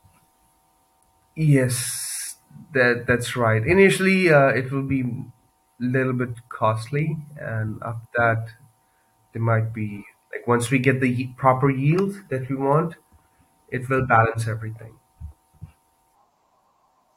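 No technical faults can be heard in this recording.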